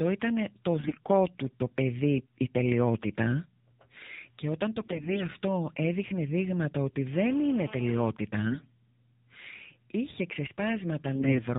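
The whole speech clip runs through the AMR narrowband mobile codec, and the damage is easy to hear. Everything above 4 kHz is gone, so the voice sounds boxed-in and phone-like. At this low rate, which fits the 7.4 kbps mode of AMR-NB, the vocal-tract model gets only a handful of pulses per subframe to work with, so the voice comes out buzzy and a bit synthetic.

On top of that there are four short bursts of AMR bit errors, at 0.78 to 0.98 s, 4.80 to 5.23 s, 8.47 to 8.68 s and 11.15 to 11.42 s. The middle burst at about 5 s is the longest, around 20 frames' worth, while the others cover roughly ten. These sound like a weak radio link where the less protected bits got flipped, at a rate of something like one bit in ten or a bit under. The frames still decoded, but the excitation pulses landed in the wrong spots and the fine gain and spectral values drifted. Pitch and loudness roughly hold, but the voice turns hoarse, scratchy and gargly for those moments.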